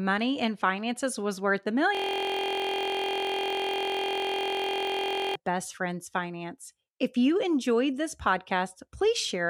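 From 1.95 to 5.35 s the speech becomes a steady 43.1 Hz buzz, a system hang loop in which one 23.2 ms slice repeats, consistent with a 1024-sample ring buffer.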